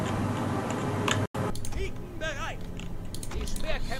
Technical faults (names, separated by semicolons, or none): input switched to a poorer device; digital broadcast dropout